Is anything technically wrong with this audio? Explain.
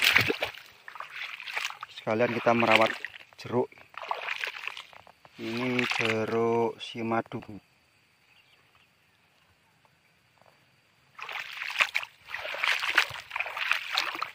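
Yes. Brief garbled flutters occur at 0.32–0.51 s, 4.39–4.59 s, 7.39–7.59 s and 11.85–12.04 s. These are frames out of order: two adjacent blocks of about 93 ms each were swapped, so each stretch plays its halves in the wrong order, but no time is lost.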